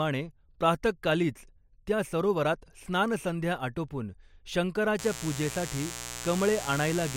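A poorly shielded or switching-affected power path injects sharp spikes twice per 60 Hz cycle from 4.99 s to the end of the speech, producing mains buzz: a steady, raspy drone stacked with 60 Hz harmonics, sitting fairly prominently beneath the speech.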